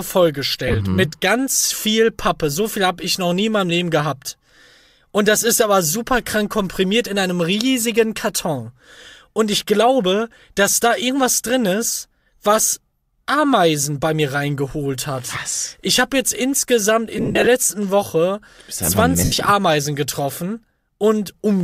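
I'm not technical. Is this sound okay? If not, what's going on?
No. Around 0.68 s, just before "mhm mit ganz viel", at 17.18–17.47 s after "habe jetzt insgesamt", and at 19.24–19.32 s, lost LE Audio frames make the wireless link drop tiny pieces. Instead of clean silence, the receiving side fills each gap with a hissy smear of the previous sound.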